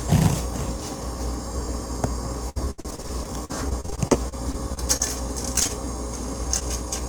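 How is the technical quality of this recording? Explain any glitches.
The recording is impaired by network faults from about 2.5 s onward.

From 2.49 to 5.02 s the audio turns choppy and robotic, a case of repeated packet loss. Twenty gaps, the longest 71 ms, were patched by extending the preceding sound, so about 22% of that stretch is filler and roughly 0.36 s of real audio is gone.

Brief smears or wobbles follow at 5.60 to 5.63 s, 5.63 to 5.67 s and 6.59 to 6.63 s. Each is a short concealed packet loss: about 20 ms never arrived, and the receiver bridged the hole by continuing the last sound before blending back.

Right after, from 5.67 to 5.71 s, a sound is held slightly too long with a slight buzz or dip. This is a short stall from a late packet. The jitter buffer emptied, so the receiver stretched the audio by 21 ms until the packet arrived, and nothing was lost.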